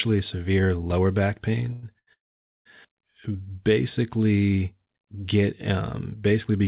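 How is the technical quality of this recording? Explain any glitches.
The recording has three timing glitches packed into about a second, all from audio arriving late over a call link. The link is narrowband, with nothing above 4 kHz, which fits a G.711 mu-law telephone codec at 64 kbps.

The two short stalls from a late packet come at 1.73 to 1.85 s and at 1.99 to 2.09 s. Each time a packet missed its slot, the jitter buffer ran dry and the receiver stretched the last bit of sound to cover the wait, about 99 ms the first time and 82 ms the second. It then resumed exactly where it stopped, so nothing is lost. You hear a sound held unnaturally long, with a buzz or dip, and everything after it is pushed later.

The call audio freeze runs from 2.13 to 2.67 s, just after the second stall. The likely cause is packets held up in transit, emptying the jitter buffer for over half a second. The receiver briefly carries on the last sound, and then about 500 ms of silence follows before the audio picks up from where it left off. 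Nothing is dropped, but a gap of roughly half a second is inserted into the speech.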